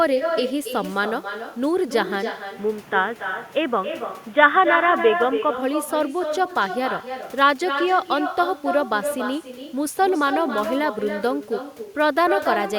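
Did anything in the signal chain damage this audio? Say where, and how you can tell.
Yes. In call processing, the far end played the call over a loudspeaker with no echo canceller. Throughout, every phrase returns about a third of a second later, about 7 dB below the original: a thinner shadow carried back over the network round trip.

From 2.56 to 5.54 s the capture side likely switched the input to a poorer device. The sound goes dull and boxy as the band narrows, with a new noise floor roughly 30 dB down. There is no gap at the switch and the level stays about the same.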